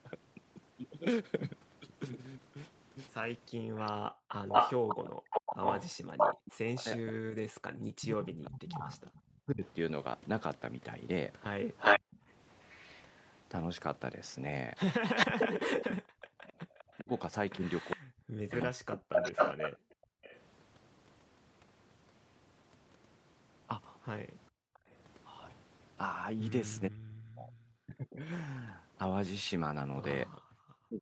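From 3.52 to 4.33 s the room background dips sharply, by about 40 dB, for around half a second. This is background gated by the echo canceller, which clamped the microphone while the loudspeaker played.

From 3.75 to 20.4 s a delayed copy of the speech trails the original by 479 ms, sitting a little louder than the direct speech. This is an echo leak, likely from an echo canceller that failed to remove the loudspeaker signal its microphone picked up.

From 5.19 to 12.04 s the speech repeatedly dips or drops out, by roughly 40 dB at worst, for about four seconds in total. This is speech suppressed in double talk, likely caused by the canceller muting both sides when they overlapped.

The background is gated again from 12.08 to 12.21 s, a brief hole, and from 16.02 to 16.43 s, dropping about 38 dB.

From 16.99 to 19.1 s the speech is suppressed in double talk again, losing about a second in pieces.

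Background gating returns from 19.77 to 20.23 s, at about 39 dB, and from 24.5 to 24.84 s, at about 40 dB.

From 24.74 to 24.79 s a very faint scrap of echo leak slips through with the same 479 ms delay.

From 26.89 s to the end the speech is again suppressed in double talk, cutting in and out by around 40 dB at its deepest.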